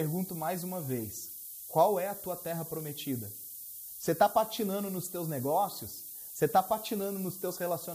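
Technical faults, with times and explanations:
Throughout, low bit depth with noise shaping: the speech is quantised to about 6 bits, and the rounding error is pushed upward, so a steady thin hiss nearly as loud as the voice climbs toward the top. A spectrogram shows a noise floor rising sharply with frequency.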